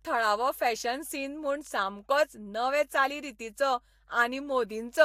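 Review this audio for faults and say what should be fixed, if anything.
Mains hum runs throughout the speech: a steady 50 Hz tone sits roughly 35 dB below the voice, with some low harmonics. Power-line current is leaking into the signal, typically through a ground loop or a transformer near the cabling. Fix it by breaking the ground loop with balanced connections or an isolator, and keeping audio leads away from power supplies.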